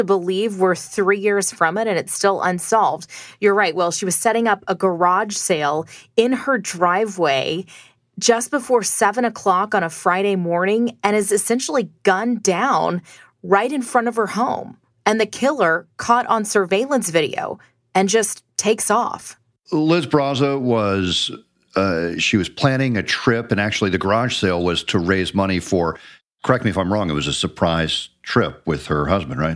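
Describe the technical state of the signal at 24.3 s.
At 24.3 s the speech signal is intact, with no technical fault audible at that moment.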